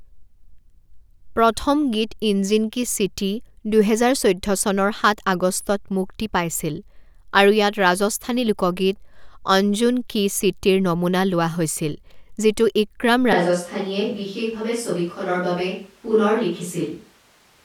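Speech recording that abruptly turns roomy, hollow and bass-light from 13.33 s to the end, likely a switch to a distant microphone. The spectrogram shows weaker lows and a noise floor roughly 35 dB under the speech, while the waveform level hardly changes.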